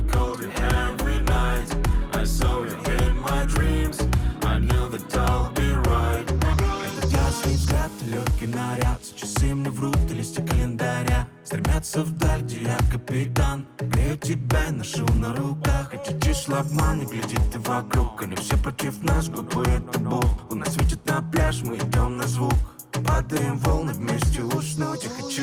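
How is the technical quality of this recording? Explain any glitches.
Two playback glitches are present.

At 6.53 s there is a skip ahead: roughly 0.4 s of audio was dropped while later audio was queued, so playback jumps forward with no gap.

From 8.06 to 9.10 s, a jitter buffer speed-up trims short pitch-period pieces, about 50 ms in total, to shrink excess delay. The audio runs 4% faster at unchanged pitch.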